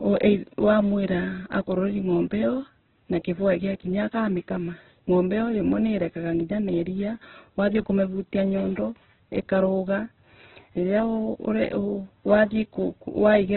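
Throughout the speech, the sound is rough, grainy and noisy, with nothing above about 4.1 kHz, giving a narrowband, telephone-like dullness. The likely cause is heavy Opus compression in its music (CELT) mode at a very low bitrate, around 8 kbps, filling starved bands with noise.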